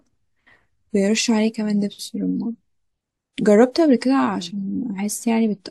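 Listening closely to this short speech recording, nothing stood out as a technical problem at any point.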